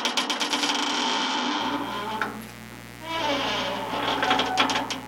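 A mains buzz enters the audio at 1.60 s and runs to the end at 5.08 s, sitting roughly 15 dB below the wanted signal as a steady, raspy hum-like rasp. Sharp switching spikes from a dimmer, rectifier or unshielded line, occurring twice per 60 Hz cycle, produce it. A spectrogram would show a comb of horizontal lines at 60 Hz multiples stretching into several kHz, while the waveform would carry spiky bursts repeating 120 times per second.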